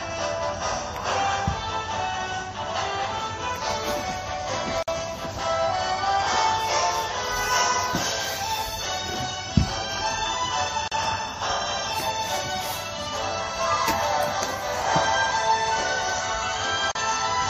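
At 4.83 s the sound drops out for about 52 ms, and it does so again at 10.88 s and 16.92 s for about 37 ms each, a steady 6-second spacing. These are gaps at joins of encoded pieces. Each piece was encoded on its own and butted against the next untrimmed, so encoder start-up delay and last-frame padding survive as silence. The edges are smeared by the codec, and the sound resumes exactly where it stopped.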